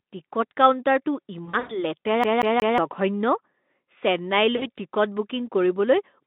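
Right after "টিকট কাউণ্টাৰটো", from 1.45 to 1.82 s, there's VoIP packet loss concealed by the speech codec. About 160 ms goes missing in gaps scattered over roughly 240 ms, and the decoder smears the last sound into a fading buzzy tone or coloured noise. There's a shorter hit of about 60 ms at 4.55 to 4.69 s. In between, from 2.24 to 2.78 s, it's a CD stuck on one turn: the same 182 ms snippet plays three times, with a tiny mute at each jump, giving that quick, even stutter.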